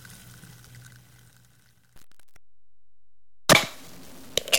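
From 1.96 s to the end at 4.59 s, the sound takes on a grainy, gritty texture that rises and falls with the signal itself. This is low bit depth without dither, most likely from truncation to about 8 bits. The rounding error sits only about 25 dB below the signal and tracks it, so quiet passages turn gritty. Unlike dithered low resolution, which leaves a steady hiss, this distortion is tied to the sound and disappears with it.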